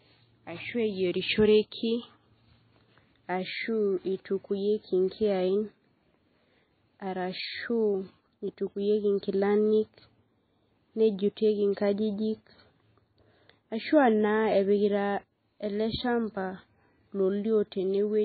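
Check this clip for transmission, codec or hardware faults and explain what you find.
One fault runs through the whole clip: heavy damage that is likely from MP3 compression. The speech has nothing above 4.5 kHz, and the remaining detail sounds watery and swirly, with s sounds turning into metallic chirps and consonant attacks smeared. Starved of bits, which fits a very low rate near 18 kbps, the encoder cuts the treble at a fixed point and drops weak frequency lines that blink on and off between frames. A plain low-pass filter would dull the sound without that swirl.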